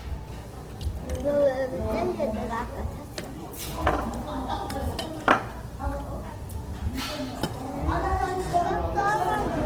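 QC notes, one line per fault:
Throughout, Opus compression: the sound is plainly grainy and rough, with tonal parts turned noisy and hissy rather than showing the swirling holes of MP3. This is likely the Opus music mode at a low rate, around 16 kbps. That mode keeps each band's energy but, short of bits, fills band detail with folded copies of lower bands or noise. Bandwidth stays fullband, with content reaching about 20.2 kHz.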